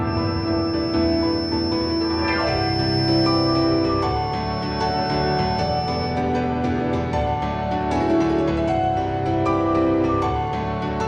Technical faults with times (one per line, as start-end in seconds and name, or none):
0.00-6.21 feedback whistle